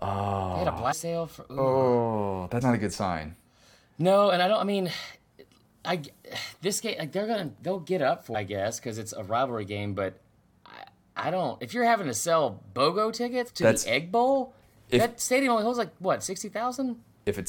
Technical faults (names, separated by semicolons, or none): damaged data in a compressed stream